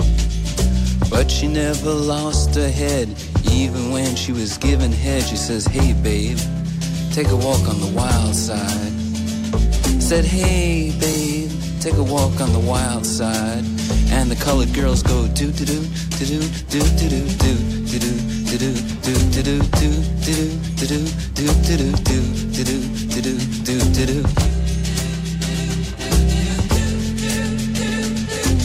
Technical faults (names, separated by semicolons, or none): none